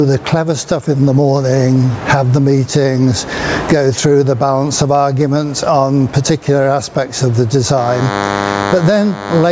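The recording carries gain pumping from start to finish: the level is pulled down on each loud sound, a swing of around 20 dB. The likely cause is gain set far too high feeding a fast limiter. On a waveform the envelope looks flattened, with quiet stretches filled in. From 7.78 s to 9.51 s a DECT cordless phone buzz joins in, a thin steady 100 Hz buzz some 15 dB below the main sound, from a nearby handset or base whose 10 ms radio bursts the audio circuit rectifies. A spectrogram shows it as a comb of evenly spaced harmonic lines at 100 Hz intervals, stacked beneath the call processing's ceiling near 8 kHz.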